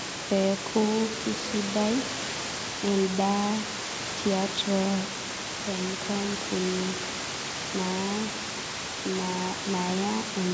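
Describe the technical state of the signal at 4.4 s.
At 4.4 s the audio is intact, with no technical fault at that moment.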